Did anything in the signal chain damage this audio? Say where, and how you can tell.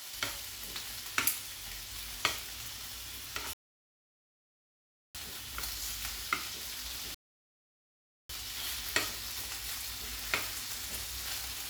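Yes: rebuffering stalls at 3.53–5.15 s and 7.14–8.29 s, at playback. The buffer ran dry, adding 1.6 s and 1.1 s of silence. The sound then resumes exactly where it stopped.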